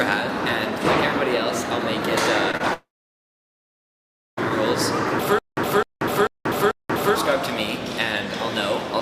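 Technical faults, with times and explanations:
2.51–2.55 s and 2.57–2.62 s: short concealed packet loss. About 20 ms of audio went missing each time. The receiver extended the previous sound, leaving a brief smear.
2.74–4.39 s: long network dropout. The last sound is continued and then fades out. About 1.5 s of near silence follows. The audio resumes later, with the missing stretch gone. A network outage is the likely cause.
5.39–7.15 s: stutter with silent gaps. A 257 ms fragment repeats four times, every 442 ms, with 185 ms of digital silence between repeats. A stalled stream is likely.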